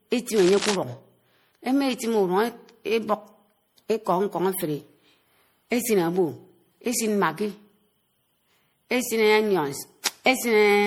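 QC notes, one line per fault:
Throughout: generation loss. The speech sounds swirly, hollow and smeared, with blurred consonant onsets. This is likely from around five successive MP3 passes at 64 kbit/s, each requantising on a shifted frame grid. A spectrogram shows accumulated holes and flickering blocks below the 20.9 kHz ceiling.
0.35–0.76 s: cable scratch noise. Dense, uneven scratching rides over the speech at about 10 dB below it, likely from a worn connector or cable being moved so its contact resistance jumps rapidly. The waveform shows ragged broadband bursts, and the spectrogram shows irregular vertical streaks.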